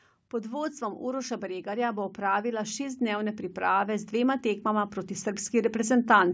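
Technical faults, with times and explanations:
0.30–6.29 s, automatic gain rising: the speech and background noise swell upward together across nearly the whole clip, ending about 13 dB louder than at the start. An automatic gain control judged the input too quiet and raised its gain slowly rather than in one step, so the level climbs smoothly for about six seconds. The gain acts on everything at once, so the noise floor rises in step with the speech.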